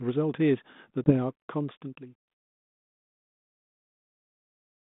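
At 1.04 s, packet loss on an ADPCM call drops roughly one packet, about 20 ms, leaving a hard-edged silent hole. The decoder's adaptive predictor and step size then disagree with the sender's, so the speech resumes slightly distorted until about 1.13 s.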